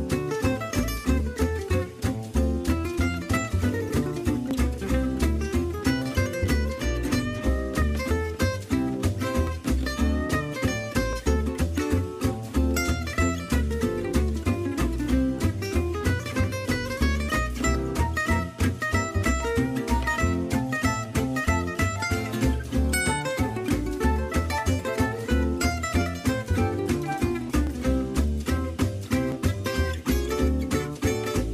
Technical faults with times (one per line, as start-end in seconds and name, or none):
1.20-30.97 clock drift buffer slips